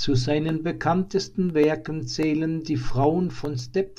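No technical faults can be heard anywhere in this speech recording. There is no moment in it that needs a timestamp.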